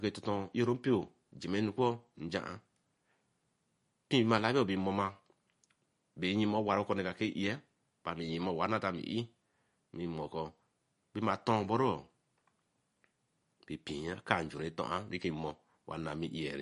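Throughout the speech, everything above 10.6 kHz is missing and faint detail flickers in and out, giving a plainly audible watery, swirly sound, likely from MP3 compression at a low bitrate of around 40 kbps. A spectrogram shows a flat ceiling with speckled gaps beneath.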